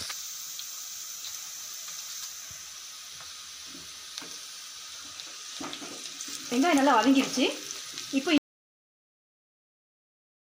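At 8.38 s the sound just cuts off mid-flow and stays dead to the end, an audio dropout to silence. There's no room tone at all, only silence, so the likely cause is the input going away, maybe a disconnect or mute, while recording carried on.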